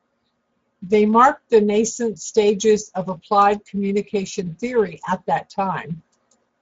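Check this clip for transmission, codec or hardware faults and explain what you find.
Speex codec damage runs through the whole clip. The speech sounds hoarse and noisy because the CELP coder has too few excitation bits at what sounds like a middle setting near 17 kbps. On a spectrogram, nothing appears above 7.7 kHz, and the region above 4 kHz looks like smeared noise rather than harmonics.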